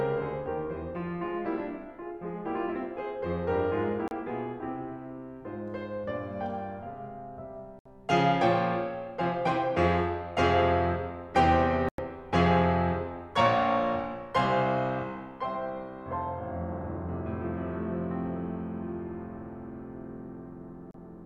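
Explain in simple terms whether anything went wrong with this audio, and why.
The music briefly cuts to silence four times: at 4.08 s, from 7.79 to 7.86 s, from 11.89 to 11.99 s, and at 20.91 s. Each gap is a digital broadcast dropout. The receiver lost or rejected a short run of digital frames and muted until good ones arrived. The gaps last about 36, 68, 100 and 36 ms, which suggests one, two, three and one lost frames of roughly 32 ms each. The music in those gaps is gone.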